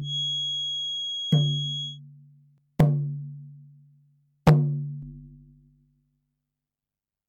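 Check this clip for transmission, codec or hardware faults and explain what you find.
Three faults are audible: a feedback whistle, a skip from compressed frames being dropped, and overlap-add ripple.

From 0 to 2.0 s a thin 3.3 kHz tone that swells and fades slowly sits about 5 dB under the sound. It is likely a feedback whistle from a loudspeaker-to-microphone loop held just at the edge of feedback. On a spectrogram it shows as a bright horizontal line.

At 2.58 s compressed frames were skipped. The audio jumps ahead by roughly a fifth of a second, which fits two frames of about 93 ms.

From 5.02 s to the end there is overlap-add ripple. Frames were rejoined with overlaps that don't sum evenly, so the level dips by about 60 dB around 100 times a second. It sounds like a harsh robotic buzz, and on a spectrogram it appears as dense vertical striping.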